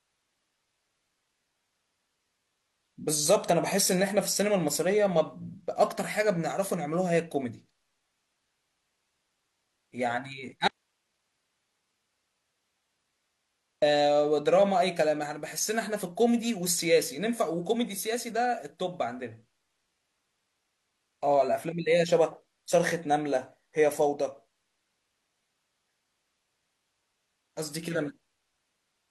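A speech recording with one audio dropout to a faint residue, running from 10.68 s to 13.82 s, about 3.1 s of lost signal. The speech cuts out abruptly rather than pausing or fading, and the gap holds only hiss sitting far below the normal level, roughly 50 dB down. Because the noise floor stays present through the gap, the downstream path remained live, and the break most likely occurred upstream at the source or its connection.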